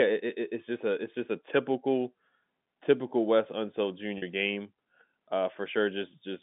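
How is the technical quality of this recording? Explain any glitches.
One glitch stands out on this telephone-band speech, which runs through G.711 coding at roughly 150 Hz to 3.6 kHz. Packet loss with pitch repetition occurs from 4.18 to 4.22 s. About 40 ms went missing, which fits two lost packets, and the receiver looped the last pitch period to fill the gap. It is heard as a brief, slightly buzzy held tone rather than the silent hole a plain dropout would leave.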